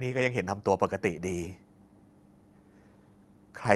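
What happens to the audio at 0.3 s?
At 0.3 s the speech comes through intact, carried normally over the WebRTC call path with nothing going wrong at that moment.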